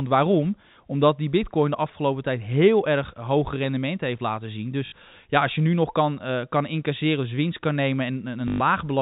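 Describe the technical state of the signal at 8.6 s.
A short robotic stutter with a 50 Hz buzz ends here, running from 8.48 to 8.6 s. This is packet loss with last packet repeated: 120 ms of speech went missing, which fits six 20 ms packets, and the receiver replayed the last one.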